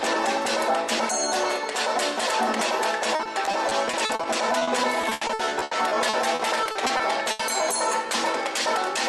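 From 3.15 to 7.41 s, the audio breaks up with repeated packet loss, giving a choppy, robotic sound. Close to thirty short gaps, none longer than 80 ms, are each patched by stretching the previous sound. The patched gaps fill roughly a fifth of that stretch.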